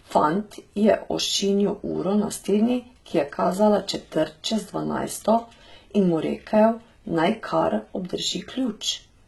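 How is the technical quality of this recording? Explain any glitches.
The recording has audible HE-AAC compression damage running through the whole speech clip. The likely cause is a very low-bitrate HE-AAC v2 encode, around 16 kbps judging by how heavy the damage is. Only the lower band is truly coded. Everything above it is rebuilt by copying lower bands upward under a coarse envelope, and nothing survives above about 11.8 kHz. As a result, s sounds come out gritty and lispy, and the treble has a metallic sheen rather than real detail.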